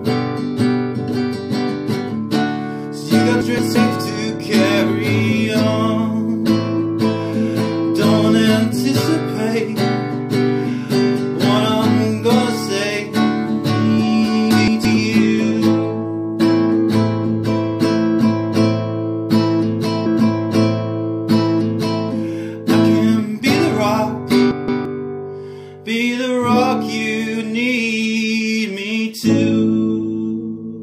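At 3.41 s to 3.76 s, 14.51 s to 14.85 s and 24.51 s to 24.85 s, chunks play out of order. Each span holds two chunks of about 171 ms. The first arrived one chunk late and plays after the one that should follow it. Nothing is missing. The order is simply wrong, leaving three hard joins. Each moment sounds briefly jumbled.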